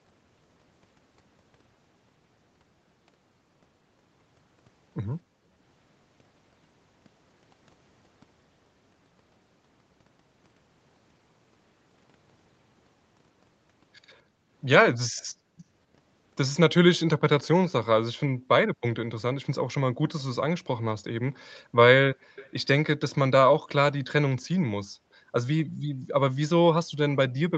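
Background gated by the echo canceller at 5.22 to 5.55 s: the room sound under the speech drops out sharply, by about 40 dB, for roughly a third of a second, then returns. While the far end's audio was playing from the loudspeaker, the canceller pulled the microphone down hard, silencing the ambience with it. The same gating recurs from 14.23 to 15.68 s, shallower at about 27 dB and covering well over half a second in dips.

Echo leak at 15.17 to 15.25 s: a faint delayed copy of speech, about 35 dB below the talker, trails roughly 244 ms behind. This is likely the loudspeaker's sound reaching the microphone and slipping past the canceller. It returns from 16.96 to 17.72 s at the same delay, louder at about 30 dB down.

The background gating recurs at 18.32 to 18.48 s and 21.54 to 22.36 s, both about 40 dB deep. Right after the second, at 22.36 to 22.51 s, the echo surfaces again, about 25 dB down with a 254 ms delay. 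The final gating runs from 24.86 to 26.08 s, again about 40 dB, with dropouts totalling most of a second. The lack of content above 8 kHz reflects normal call microphone processing.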